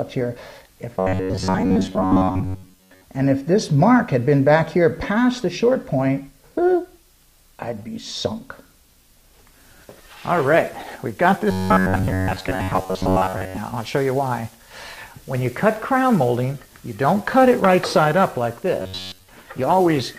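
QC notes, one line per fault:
0.99–3.04 s, 11.51–13.57 s, 18.82–19.28 s: robotic sound from repeated short buffers. A rigid, metallic 93.8 Hz buzz is heard, likely because late audio is filled by looping 10.7 ms chunks, with roughly seventy percent repeated. On a spectrogram, evenly spaced horizontal harmonic lines appear. On a waveform, identical cycles repeat.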